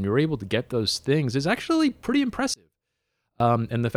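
From 2.54 to 3.40 s the speech drops by about 32 dB to a faint trace, likely one channel inverted, cancelling everything shared when summed to mono.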